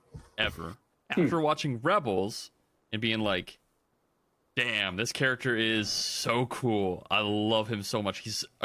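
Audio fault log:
Nothing stood out on listening to this speech recording.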